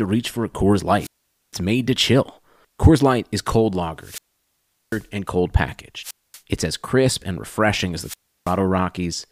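Wireless microphone squelch dropouts occur at 0.98 to 1.56 s (about 0.46 s muted, before "made to chill"), 4.00 to 5.07 s (0.74 s), 6.01 to 6.40 s (0.23 s, after "and cold") and 7.99 to 8.57 s (0.33 s, after "crisp and refreshing as"). Each time the analogue FM signal weakens, hiss swells, and the receiver's squelch shuts the output, leaving a near-silent hole before the speech returns.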